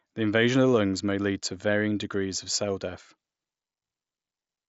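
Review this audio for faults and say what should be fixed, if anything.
Nothing here needs fixing; the speech comes over the Bluetooth mSBC headset link as expected, with the top of the band stopping around 7.7 kHz as that codec does.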